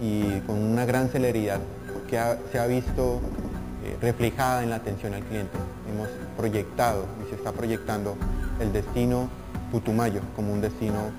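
Throughout, a bright metallic fizz tracks the sound's level, about 22 dB down, spanning 5.5 to 11 kHz. This is imaging from sample-and-hold upsampling: each sample was repeated without smoothing, which fits a rise from about 11 kHz to 44.1 kHz, leaving mirrored spectrum copies.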